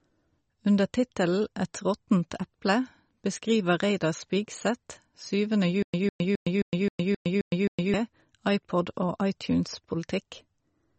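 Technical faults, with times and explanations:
Throughout: MP3 compression. The speech has a watery, swirling quality, with metallic chirps on s sounds and smeared consonant onsets, and nothing is present above 8.4 kHz. The likely cause is an MP3 encoder starved of bits, which fits a low bitrate around 34 kbps. It cuts the treble at a fixed point and drops weak frequency lines, which then flicker on and off between frames and produce the swirl and chirps.
5.83 to 7.94 s: stutter with silent gaps. A burst of about 152 ms plays, then about 113 ms of dead digital silence follows, and the pair repeats every 264 ms, eight times in all. Whatever should have played during those two seconds is missing. This likely comes from a stalled player or stream that replayed its last buffered fragment on each retry and then ran empty until the next attempt.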